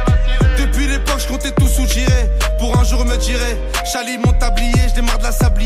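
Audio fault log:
No faults can be heard; the signal is continuous and shows no technical problems anywhere in the clip.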